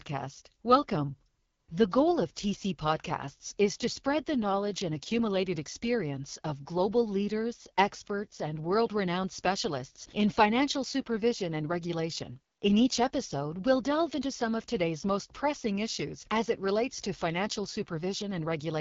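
AMR wideband (HD Voice) codec damage runs through this speech clip from start to finish: roughness and rasp that fit a low rate near 8.85 kbit/s, with nothing above 7.5 kHz.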